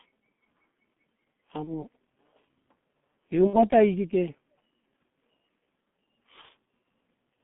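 From the start to the end of the speech, the signal carries heavy G.723.1 codec damage. The band runs only from about 150 Hz to 3.5 kHz, so the voice is muffled and lacks air. The slow updates of the vocal model across long frames make it hoarse and smear consonant edges. That sound fits a low-rate stream near 6.3 kbit/s working in 30 ms blocks.

Three dropouts show VoIP packet loss concealed by the speech codec. The first runs from 1.64 to 1.77 s, the second from 3.47 to 3.66 s, and the third from 6.41 to 6.47 s. In each, the decoder repeats its last pitch and filter state at falling gain, producing a brief buzzy tone or coloured noise that fades. The first and third gaps fit a single lost 30 ms frame. The second is longer and fits about 60 ms missing. The disturbance outlasts the gap itself because each frame is rebuilt from the one before.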